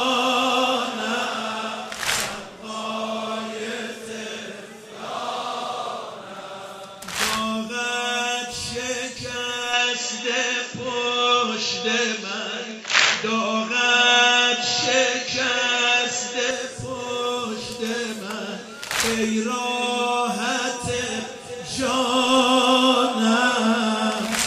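From 9.73 s to 16.51 s the sound abruptly narrows: nothing reaches above 7.6 kHz, the level shifts by about 5 dB, and a faint new background noise sits roughly 50 dB below the signal. The change happens with no gap, and the full band returns just as suddenly at 16.51 s. The cause is likely an input switched to a poorer device, a second microphone or headset path with its own bandwidth, gain and noise floor.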